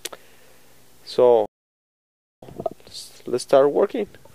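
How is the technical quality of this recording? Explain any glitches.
One clear glitch affects the recording: a playback stall cutting the sound off for nearly a second.

From 1.46 s to 2.43 s the audio stops abruptly mid-flow and silence holds for about 0.96 s before sound returns. This is likely a player that ran out of buffered data or had its output thread blocked, leaving the device with nothing to play until it recovered. On a waveform it appears as a flat, silent gap with hard edges, and on a spectrogram as a sharp-sided, fully empty vertical band.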